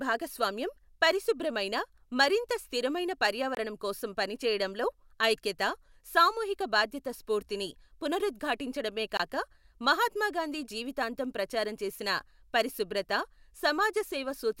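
A single audio packet likely failed to reach the headphones in time and was dropped, a Bluetooth dropout, so the output went silent for about 23 ms from 3.55 to 3.57 s, just after "భాగస్వామ్యం పరిశుభ్రమైన మరింత స్థిరమైన" and before "కోసం పని చేయడంలో ఐక్యత". The same short gap recurs at 9.17 to 9.20 s, right after "సామూహిక బాధ్యత స్ఫూర్తిని పునరుద్ఘాటించడమే". Each time the speech resumes further along, as though it kept playing underneath.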